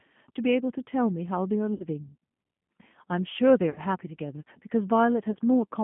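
Speech that sounds slightly rough and synthetic throughout, confined to roughly 150 Hz to 3.4 kHz, with plainly audible G.729 codec damage. The 8 kbit/s codec rebuilds each frame from a vocal tract filter, a pitch predictor and a few pulses, discarding everything above the line band. Three brief fading smears occur at 1.74–1.86 s, 3.70–3.80 s and 5.32–5.37 s. This is VoIP packet loss concealed by the speech codec: the decoder stretched its last pitch and filter across about 60, 60 and 30 ms of missing audio, which fits two, two and one lost packets. The weakened sound then takes a moment to recover after each gap.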